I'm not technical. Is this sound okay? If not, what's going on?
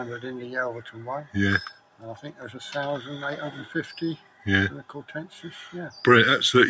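No. A noise suppressor built for calls and meant for speech was left switched on while this sound played. That is the noise suppressor applied to music or sounds problem. The filter treats steady tones, room ambience and echo as if they were background noise and keeps turning them down, while sudden starts mostly get through. So the level keeps rising and falling throughout the clip instead of staying natural.

At three moments the sound cut by the noise suppressor shows up. The filter judged part of the audio to be noise and pushed it down further than everything else. This happens from 1.72 to 2.42 seconds, from 4.17 to 4.46 seconds, and from 4.83 to 5.12 seconds. In those stretches, held or fading sound sinks away or gets cut short before it finishes.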